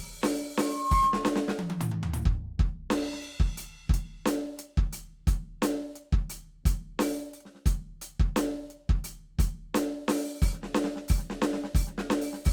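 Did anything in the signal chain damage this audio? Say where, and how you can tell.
Yes: loudspeaker feedback squeal from about 0.58 to 1.53 s, arising in the analogue stage where a microphone hears its own loudspeaker. A single 1.1 kHz tone swells out of the music in under half a second and sits a few decibels above it until it stops. At that frequency the mic-to-speaker loop had gain above one, so each pass round the loop reinforced the tone until the loop was broken.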